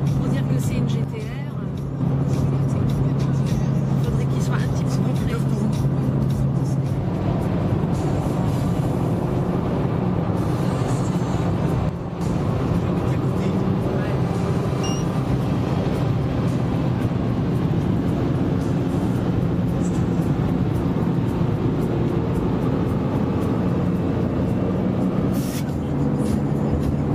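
At 1.04 s the level falls abruptly by about 6 dB and holds there until 2.01 s, then does so again from 11.89 to 12.21 s. This is likely one channel drops out: with one stereo side briefly lost, the mono sum keeps only half of the shared material, and anything unique to that side vanishes. On the waveform both stretches show a sudden, flat-edged narrowing of the envelope. A spectrogram shows an even dimming across all frequencies with sharp vertical boundaries.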